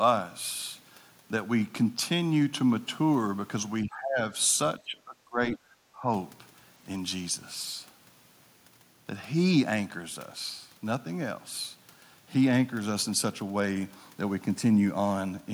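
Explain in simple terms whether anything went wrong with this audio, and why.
Yes, something went wrong, and it was likely the echo canceller struggling while both sides talked at once. Unable to tell this speaker apart from the other person's voice coming through the loudspeaker, it turned everything down together. This is speech suppressed in double talk. The speech sinks from 3.84 to 4.24 seconds, falls away most deeply from 4.85 to 5.62 seconds, and dips briefly and more gently from 5.96 to 6.08 seconds.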